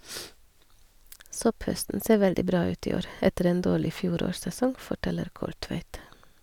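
Speech recording with no audible technical faults anywhere.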